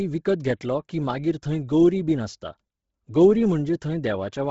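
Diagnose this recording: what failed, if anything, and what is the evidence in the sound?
Codec stage: likely Bluetooth LC3 compression, heavily starved throughout. The speech stops at 7.7 kHz and has a breathy, grainy edge from noise-filled upper bands.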